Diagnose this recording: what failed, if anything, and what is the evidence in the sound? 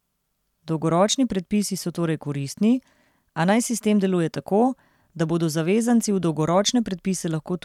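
Nothing failed; the speech shows no audible technical fault.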